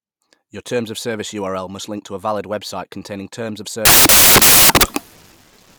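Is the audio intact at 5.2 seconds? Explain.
No. At 5.2 seconds you're inside a stretch of samples built from the wrong bytes, running from about 3.85 s to the end. The bytes of each sample get assembled wrongly, so the jittery low bits turn into the big part of the value, and the speech is swamped by loud, harsh broadband noise.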